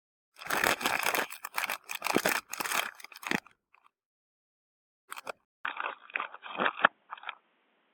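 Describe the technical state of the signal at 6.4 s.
At 6.4 s the sound is dull and boxy, with nothing above 3.8 kHz and a faint new noise floor roughly 40 dB down, at unchanged level. A 200 ms silence at 5.45 s marks the change, likely an input switched to a poorer device, lasting to the end.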